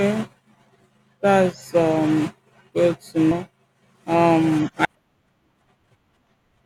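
Compressed frames skipped at 3.31 s and again at 4.85 s. Each time a run of encoded frames never reached the output, either missing from the stream or rejected by the decoder as corrupt, so playback jumped ahead. About 200 ms of speech vanishes at each point, which fits roughly seven 32 ms frames. At each seam the speech abruptly resumes further on.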